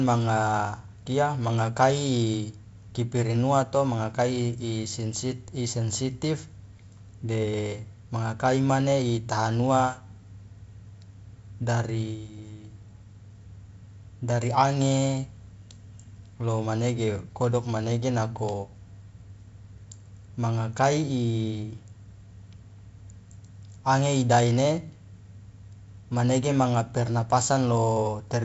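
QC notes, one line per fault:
No faults are audible in this speech recording. The G.722 wideband telephone coding path is working as expected: nothing is heard above about 7.7 kHz, and the light hiss and slightly noisier lower band fit its 48 kbit/s mode.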